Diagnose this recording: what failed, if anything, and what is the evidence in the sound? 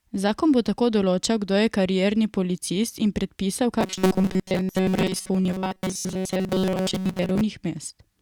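The fault sits at the driver or buffer stage. From 3.81 s to 7.41 s the speech turns into robotic sound from repeated short buffers: a rigid, metallic buzz at 188 Hz that still tracks the syllables roughly. Most of that stretch, around seventy percent, is repeated material rather than new audio. The likely cause is audio arriving too slowly, so the software loops the last fragment. A 188 Hz buzz fits a repeat of about 5.3 ms. Unlike codec warble, the buzz stays at a fixed rate.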